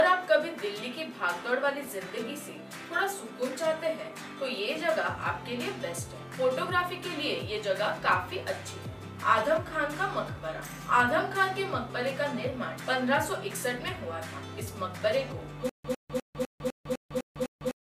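At 15.69 s a stutter with silent gaps begins and runs to the end of the clip. A burst of about 0.1 s repeats eight times, each followed by about 0.15 s of digital silence, so it recurs every 0.25 s. The likely cause is a stalled player or stream replaying its last fragment on each retry, with the intended audio lost. On a waveform, identical blocks alternate with flat, near-silent gaps. A spectrogram shows the same vertical stripes against blank columns.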